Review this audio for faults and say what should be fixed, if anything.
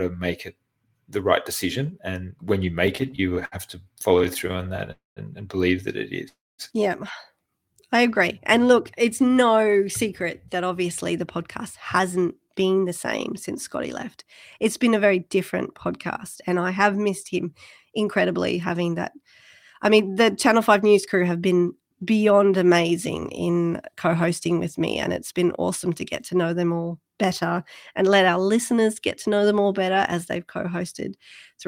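From 2.87 to 4.91 s the speech drags and stutters, breaking into roughly two dozen short hitches, the longest 67 ms, which together stretch the passage by 363 ms. These are repeated stalls (stutter). Packets kept arriving behind the playout rate, so the jitter buffer emptied over and over, and each time the receiver extended the last sound until data caught up. About 18% of that span is filled-in audio rather than real signal, though nothing is lost. Fixing the network path's delay variation, or giving the jitter buffer a larger starting target, would prevent it.

Two call audio freezes follow. From 4.92 to 5.19 s a brief continuation of the last sound fades into about 160 ms of silence, inserting 248 ms of gap. From 6.28 to 6.62 s the same happens with about 230 ms of silence, inserting 301 ms. The likely cause is packets held up in transit until the buffer ran dry, after which playback resumed where it stopped, so the delay grew by the length of each gap. 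Reducing bursty network congestion would prevent this.

Between 7.65 and 7.97 s the speech slows to about 90% speed at unchanged pitch, sounding slightly drawn out, with 42 ms added. This is a jitter buffer slow-down: with its reserve low, the receiver repeated single pitch periods to rebuild it. A steadier packet flow, so the buffer never runs short, would prevent it.

From 9.6 to 21.07 s the speech runs slightly fast, at about 104% speed with pitch intact, with roughly half a second removed in total. This is a jitter buffer speed-up. The buffer held more audio than its target, so the receiver trimmed short pitch-period pieces repeatedly to bring the delay back down. Smoothing delivery so packets don't arrive in clumps would prevent it.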